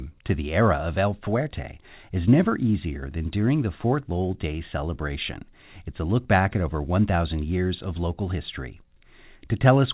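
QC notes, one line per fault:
No faults heard; call audio stops at 4 kHz.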